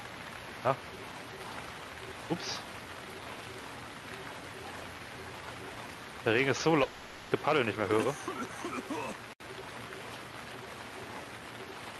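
A long network dropout likely halted the stream from 6.83 to 7.33 s; concealment fills it with fading buzz, and the lost audio never returns.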